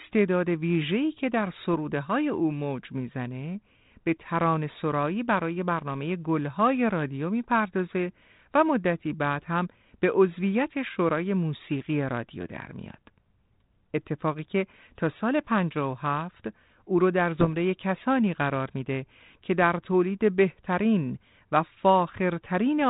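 Speech carried over a 32 kbit/s G.726 ADPCM path, band-limited below 4 kHz. Bit errors on an ADPCM link hit from 17.39 to 17.49 s, a cluster of pops and rough, grainy bursts with brief jumps in level. Each flipped bit corrupts not just one sample but the decoder's adaptive step size and predictor state, so the disturbance rings on for several milliseconds. The density suggests an error rate of roughly 0.4 percent.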